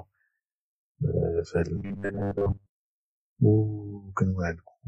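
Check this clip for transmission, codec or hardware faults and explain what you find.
There's one fault here: robotic sound from repeated short buffers, running from 1.76 to 2.76 s, right after "في هذا". For that second the speech collapses into a stiff, metallic buzz pinned at 100 Hz, still loosely tracking the words. The likely cause is audio arriving too slowly, so the playback side loops the last chunk, about 10 ms given that buzz pitch, and most of the real audio in that stretch gets skipped.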